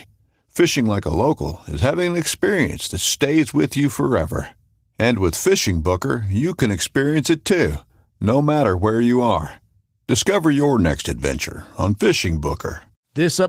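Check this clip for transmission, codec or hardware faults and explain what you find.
Nothing to flag here; the speech comes through Opus voice compression at 20 kbps in hybrid mode just as that link normally sounds.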